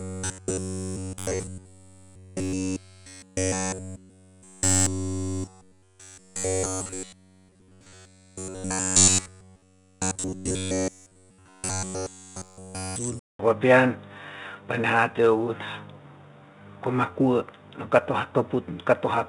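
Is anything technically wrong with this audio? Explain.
Yes. Throughout, 4-bit ADPCM compression codes each sample as a coarse step from a prediction, leaving level-following gritty hiss on loud sounds, plainly audible.

From 0.01 to 12.96 s, the input was likely arriving too seldom, so roughly 10.7 ms buffers repeat constantly, imposing a rigid 93.8 Hz robotic buzz.

From 13.19 s, the input likely switched to a poorer device: after 200 ms of silence, sound turns dull, about 5 dB different in level, with new noise about 45 dB down.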